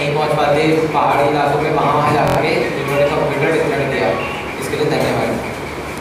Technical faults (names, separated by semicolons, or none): repeated buffer